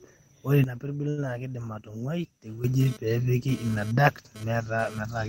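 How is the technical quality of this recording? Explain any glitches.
The recording has three clear glitches. Level, timing and interference each break down once.

From 0.64 s to 2.64 s there is a sudden gain jump. The speech drops by about 12 dB in an instant, and the background noise drops with it. At 2.64 s both snap back up. There is no fade at either edge. The likely cause is a digital gain setting applied from one sample to the next, without a ramp.

Between 1.09 s and 1.20 s there is a short stall from a late packet. A packet arrived about 81 ms late, and the jitter buffer ran dry. The receiver held the last bit of sound for about 81 ms to fill the gap. When the packet came in, playback resumed from the same point. Nothing is lost. One sound is simply stretched too long, with a slight buzz or dip.

From 2.80 s to 4.99 s a GSM phone buzz sits under the speech. It is a hard, raspy tone at about 217 Hz, with many harmonics. 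It has nothing to do with the speech. A nearby 2G phone sends radio bursts 217 times a second, and the audio circuit rectifies those pulses into sound. The buzz comes and goes here, which fits a data transfer. Its level is about 21 dB below the speech.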